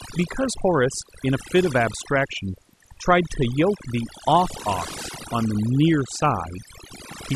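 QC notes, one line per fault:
Throughout: overdone noise removal. A noise reduction stage set far too aggressively is pulling individual frequency bands down hard, or muting them outright, whenever their level sits near its noise estimate. Quieter parts of the speech fall below that threshold and vanish along with the noise, while the gaps between phrases drop to near silence dotted with twinkling specks. On a spectrogram the background shows as a dark field scattered with isolated bright dots, and the voice's fainter harmonics appear ragged and broken.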